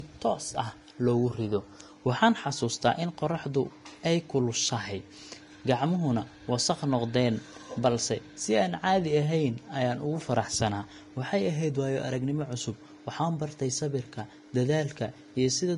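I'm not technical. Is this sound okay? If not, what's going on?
No. The speech sounds dull all the way through, with leftover compression artefacts and nothing above about 10.6 kHz. This is likely low-bitrate audio saved at a high bitrate. The large file can't restore the detail the first, heavier compression threw away.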